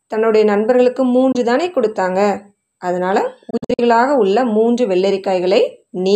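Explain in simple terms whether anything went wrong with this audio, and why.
Yes, something went wrong: the speech has short holes where the sound just cuts out, most likely a Bluetooth dropout. Around 1.32 s there's a quick gap of about 23 ms, which fits one lost packet. Then from 3.50 to 3.81 s it gets choppy, with several tiny gaps totalling about 160 ms, the longest about 46 ms. Each time the speech picks up further along, as if it had kept playing, because the missed audio never reached the headphones in time.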